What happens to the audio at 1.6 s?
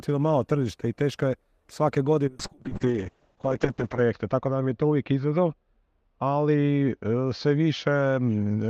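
Nothing goes wrong at 1.6 s; the audio plays through that moment intact, with no dropout, click or other fault.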